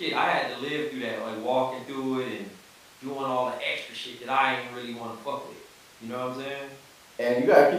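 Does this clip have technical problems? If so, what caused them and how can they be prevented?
No, nothing in this speech clip points to a technical problem, so there's no cause to track down or anything to prevent.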